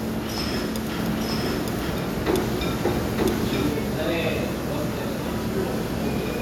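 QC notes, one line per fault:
0.99–3.73 s, doubled audio track: a second full-band copy runs about a second behind at roughly equal level, likely from a duplicate capture path or misaligned edit. Unlike echo or reverb, it has no decay or room colour and cuts in and out abruptly.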